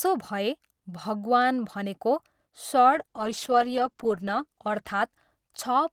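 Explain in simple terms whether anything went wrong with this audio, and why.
From about 2.95 s until the end, the speech turns rough and watery, and the crisp top end fades so it sounds duller, as if heard through a cheaper phone line. This is a call bitrate drop: the connection judged it had less room, so the encoder was told to squeeze the speech into far fewer bits, coding it more coarsely and trimming the highest sounds. It sits at its worst for about 1.3 s.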